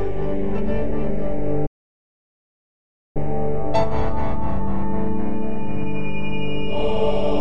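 At 1.66 s the player likely ran short of data, causing a playback stall: the music drops to silence for about 1.5 s, resuming at 3.17 s.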